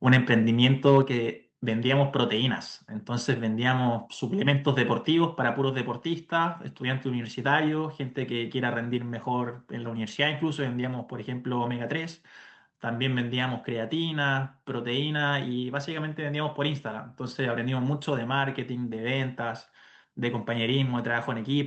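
From 0.62 to 0.99 s, microphone overload, likely from input gain set too high. Peaks run about 2 dB past the converter's limit, flattening a small share of samples into harsh crackle. At 1.02 s the microphone volume steps down by about 4 dB, likely the call software reacting to that clipping. The sound abruptly becomes quieter, with the band still ending near 8 kHz.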